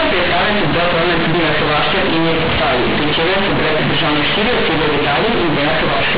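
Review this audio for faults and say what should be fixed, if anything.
Companded audio read as linear runs through the whole clip. The A-law bytes are played as plain 8-bit samples without expansion. Quiet and loud speech come out similarly large, giving harsh, buzzy distortion and strong noise in pauses. To prevent it, expand A-law to linear PCM before playback.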